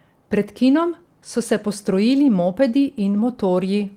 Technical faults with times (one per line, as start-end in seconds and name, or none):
none